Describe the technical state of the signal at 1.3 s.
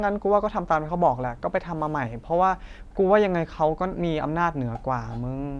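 At 1.3 s the speech signal is intact, with no audible fault at that moment.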